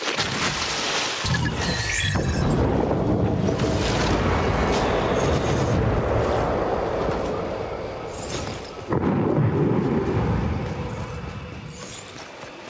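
Right from the start and all the way through, there's gain pumping. The gain ducks by something like 10 dB the moment a loud sound arrives, so the level breathes in and out and loud and soft parts sit squashed close together. That's most likely the input gain set far too hot, with a fast limiter yanking it down on each peak. Separately, nothing reaches above 8 kHz, which fits a wideband call codec like G.722.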